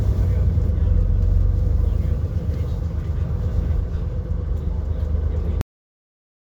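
At 5.61 s the recording system stopped writing out the final buffers, leaving a cut-off end. The sound is chopped mid-event rather than allowed to finish: its tail never arrives, and there is no fade or natural decay. Instead the audio falls straight into digital silence, which fills the remaining 0.8 s or so. The result is an abrupt, unnatural stop, as though the playback were switched off partway through.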